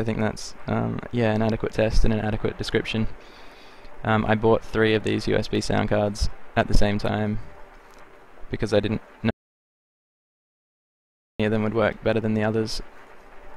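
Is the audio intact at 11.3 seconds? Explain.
No. At 11.3 seconds the clip is inside an audio dropout to silence running from 9.30 to 11.40 s. The sound stops abruptly and the gap is silent, with no room tone. The input was likely lost while recording continued. About 2.09 s is missing.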